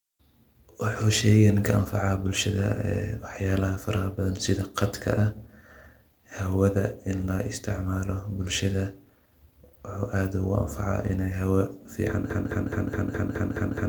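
The playback or stream likely stalled and kept resending the last fragment it held, producing a broken-record loop from 12.30 s to the end: a 210 ms piece of speech repeats exactly eight times back to back, and whatever should have followed is lost.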